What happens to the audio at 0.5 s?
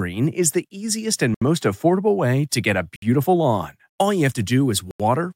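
Nothing goes wrong at 0.5 s; the speech there is intact, with no dropout, click or distortion to be heard.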